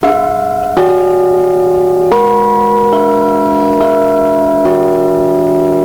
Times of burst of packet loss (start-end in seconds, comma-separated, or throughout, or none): none